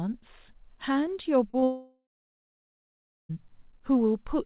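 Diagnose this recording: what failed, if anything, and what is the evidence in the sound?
At the network stage, packets went missing twice in quick succession, at 1.50 s and 1.59 s, and the decoder concealed each gap by extending the preceding sound for about 30 ms. This short concealed packet loss is heard as brief smears, with roughly 40 ms and 20 ms of real speech lost.

The sound stops at 1.64 s and returns at 3.31 s. Concealment first continues it as a fading buzz or hiss, then leaves about 1.3 s of silence. The likely cause is a long network dropout, and the speech resumes past the missing stretch. Throughout, nothing above 4 kHz is present, which fits a narrowband G.711-type call codec.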